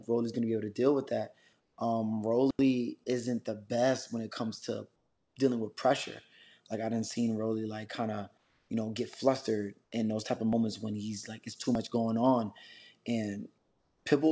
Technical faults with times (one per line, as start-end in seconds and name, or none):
1.60-1.78 comfort noise in place of the background
4.96-5.36 comfort noise in place of the background
8.38-8.70 comfort noise in place of the background
9.84-9.92 comfort noise in place of the background
13.58-14.06 comfort noise in place of the background